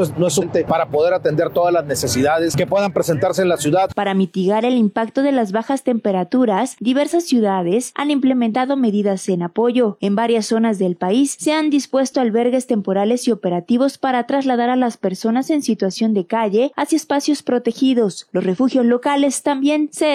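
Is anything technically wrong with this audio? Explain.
Yes. Damaged data in a compressed stream occurs four times, at 0.38 to 0.43 s, 3.86 to 3.91 s, 8.50 to 8.55 s and 18.53 to 18.58 s, each about 50 ms long. At those points the encoded bytes are corrupted, so the decoder misreads or rejects the affected frames, loses its place in the stream and has to hunt for the next valid frame header before it can resume. Each event is a brief chirp, squawk, click or short hole that breaks through the sound.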